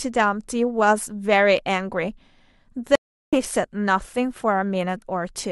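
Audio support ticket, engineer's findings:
Speech drops to dead silence at 2.95 s for about 372 ms, back at 3.37 s with a soft fade-in and roughly a third of a second of content skipped. Stream reconnect: connection lost, player reconnected and restarted the decoder mid-stream, rejoining live at a later point, first frame fading in on decoder start-up. Component: network and streaming client reconnect path.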